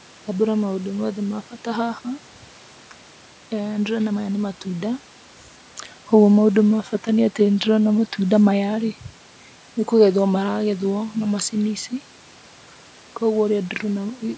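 Nothing is technically wrong with the speech recording: it has passed through a call's normal microphone processing, with no content above 8 kHz and the lowest bass trimmed, and the room's background noise sits about 32 dB below the speech.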